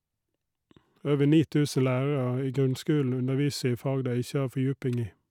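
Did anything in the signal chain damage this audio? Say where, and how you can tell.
No, nothing in the signal chain damaged this audio.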